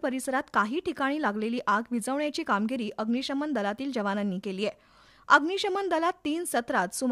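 Nothing here jumps out as a technical problem; it runs along without a dropout, glitch or distortion anywhere in it.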